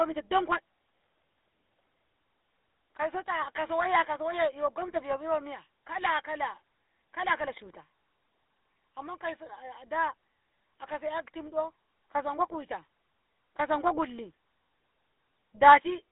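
From start to finish the speech carries GSM full-rate codec damage, and it is plainly audible. The codec rebuilds the voice from a vocal-tract model excited by a sparse, regularly spaced pulse train, so the excitation detail is coarse and the result sounds buzzy and gravelly. The band is held to roughly 300 Hz to 3.6 kHz, with nothing above 3.8 kHz, giving a thin telephone tone. The damage fits a 13 kbps stream.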